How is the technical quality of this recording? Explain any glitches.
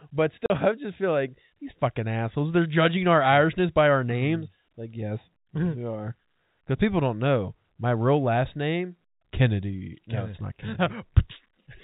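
There is one glitch, early on, heard through a telephone-band G.711 channel that cuts everything above 4 kHz. At 0.46 to 0.50 s, packet loss filled with silence leaves a 40 ms hole, fitting two 20 ms packets, with hard edges rather than concealment's smoothed, repeated sound.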